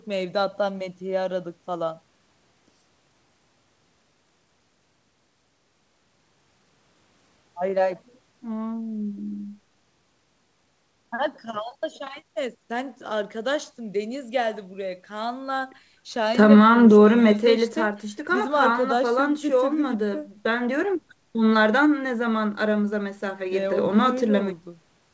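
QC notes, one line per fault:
No faults found.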